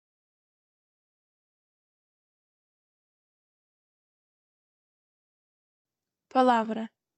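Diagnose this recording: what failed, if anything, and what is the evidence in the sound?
At the driver or buffer stage, playback fell behind and a repeated buffer resulted. From 6.14 s to 6.17 s, one stretch of about 21 ms sounds twice in a row, with a hard join where the repeat begins. That gives a brief stutter rather than a gap. The length fits a 1024-sample buffer: when fresh data was not ready, the device replayed the previous block, and roughly 20 ms of audio was lost.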